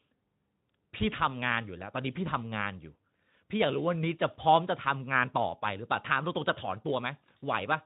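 Speech, carried through a Speex codec path whose coding leaves only a light trace, with no technical faults to report.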